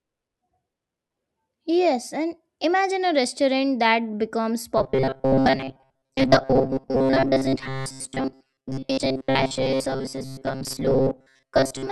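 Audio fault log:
4.78 to 11.91 s, robotic sound from repeated short buffers: the speech turns into a rigid metallic buzz pitched at 133 Hz that still loosely follows the words. This is likely from fresh audio arriving too slowly and a snippet of about 7.5 ms being replayed for most of this stretch.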